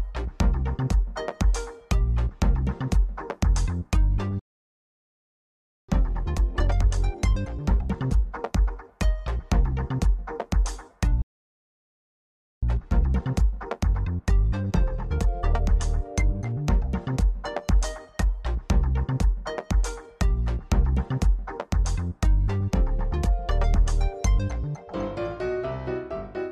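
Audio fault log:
4.39–5.89 s and 11.22–12.63 s, playback stall: sound cuts out mid-flow for about 1.5 s then 1.4 s, likely the player starving for data or a blocked thread.
5.89–8.89 s and 12.63–15.63 s, time-compressed catch-up: after each gap it rushes along at 1.15x then 1.1x, same pitch, from spliced, cross-faded snippets.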